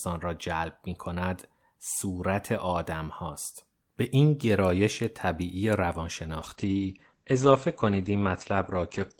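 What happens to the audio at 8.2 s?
At 8.2 s the speech is inside a call bitrate drop running from 6.43 s to the end. The encoder falls from 48 to 10 kbps and narrows its band from 20 kHz to 8 kHz, so the sound turns muffled and rough. A spectrogram shows a flat ceiling at 8 kHz with nothing above it.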